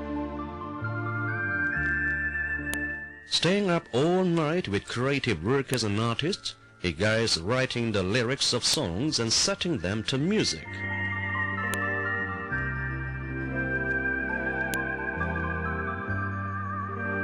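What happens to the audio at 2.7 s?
At 2.74 s there is a sharp, loud click: a file header played as audio. When the pieces, about 3 s long, were joined, a WAV header was left in, and its bytes play as samples. Unlike a clipping or dropout click, it ignores the signal's level and sits exactly on the piece boundary.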